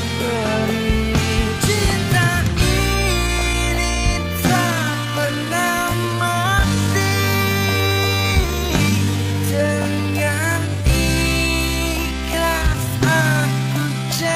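At 3.19 s the pace suddenly drops to about 0.67 times speed until the end, pitch unchanged. This time-stretched section drags, likely from software repeating short pieces.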